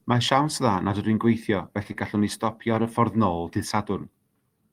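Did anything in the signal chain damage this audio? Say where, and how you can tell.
Yes. Between 1.83 and 2.48 s the speech drags and stutters through four brief stalls, each at most 20 ms and about 49 ms in all, with nothing lost. These are repeated stalls (stutter): late network packets emptied the jitter buffer, and the receiver stretched the last sound to bridge each wait.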